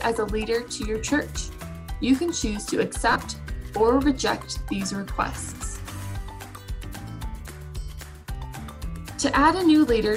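From 3.12 to 3.16 s, lost LE Audio frames, fitting about five 7.5 ms frames, forced the LC3 decoder to repeat its last spectrum with random signs. The loss is brief, about 37.5 ms.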